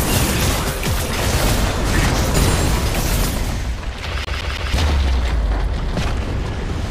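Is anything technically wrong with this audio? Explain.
Yes. From 4.25 to 4.74 s the CD is stuck on one turn: the laser jumps back a track each rotation, repeating a 164 ms slice three times with brief mutes.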